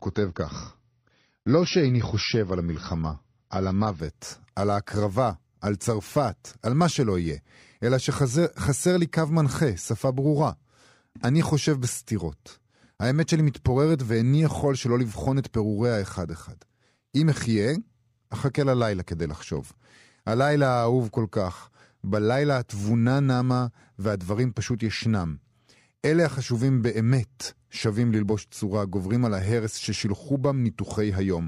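A speech recording whose player began on a low rung, an adaptive stream starting at a low bitrate, before switching to a better version after gauging the connection. From 0.0 to 4.0 s nothing is heard above 6.5 kHz, so the speech is dull and codec smearing is prominent, which fits roughly 24 kbit/s AAC. At 4.0 s the treble returns abruptly with no gap, consistent with a step up to around 96 kbit/s.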